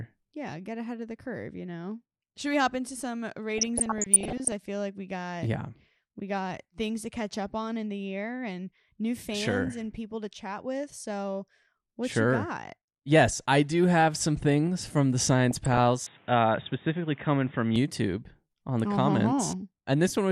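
MP2 compression runs through the whole of this speech recording. The top end is dull, and a gurgling, granular texture sits on the sound, most likely from MPEG Layer II coding at a low rate, which fits something around 80 kbps. With so few bits to share across the coder's 32 sub-bands, the upper bands keep dropping out and coming back, and the bands that stay are quantised coarsely enough for the damage to be plainly audible. DAB burbling breaks in from 3.58 to 4.52 s and again, more briefly, from 15.51 to 15.80 s. Weak reception is letting bit errors, on the order of half a percent, slip past the error correction into the audio data. Corrupted samples then put short blips of noise into single sub-bands, and corrupted scale factors make sub-bands jump in level for up to a frame, across 42 frames in the first burst. An input switched to a poorer device follows from 16.07 to 17.76 s. The sound turns boxy and narrow, with nothing above 3.8 kHz, and a new background noise sits about 30 dB below the speech. 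The level stays the same and no gap is heard at either switch, which points to the system likely changing mid-recording to another microphone or a headset's call profile and then back.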